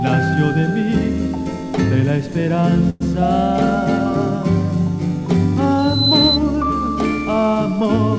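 Call audio carried over a G.722 path, with nothing above 8 kHz, and two faults. From 2.90 to 3.02 s the sound stalls into a 105 ms continuation of the last sound, then resumes where it left off with nothing lost. This is likely a call audio freeze, where delayed packets emptied the jitter buffer. From 5.78 to 6.39 s a loudspeaker feedback squeal appears as a 4 kHz tone that swells over roughly a third of a second to about 5 dB above the signal. It comes from the microphone picking up its own loudspeaker until the loop gain at that frequency exceeds one.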